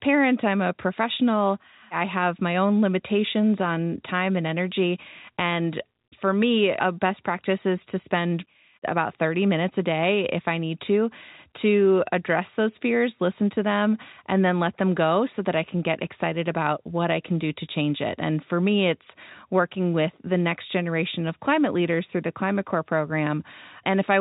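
No technical faults are audible.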